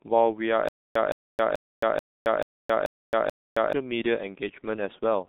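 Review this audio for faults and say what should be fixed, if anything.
The whole clip has been through the G.723.1 codec. Nothing comes through above about 3.8 kHz, so the speech sounds muffled and hoarse with smeared consonants. That heavy damage fits a low-rate codec around 6.3 kbit/s. To prevent it, use a wideband codec like Opus at a decent bitrate instead.

From 0.69 to 3.73 s there's a stutter with silent gaps. The same 166 ms fragment comes back seven times, every 435 ms, with about 269 ms of dead silence between repeats. The likely cause is a playback or stream stall, with the material in those gaps simply lost. To prevent it, give the player a bigger jitter buffer and fix whatever is starving the stream.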